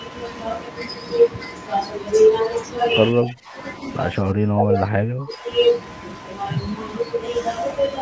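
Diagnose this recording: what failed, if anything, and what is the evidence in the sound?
The speech level falls sharply from 3.13 to 3.55 s, by about 20 dB, and from 4.12 to 5.47 s, by about 25 dB. This is likely speech suppressed in double talk at the call-processing stage: the echo canceller mistook the talker for loudspeaker echo and attenuated it.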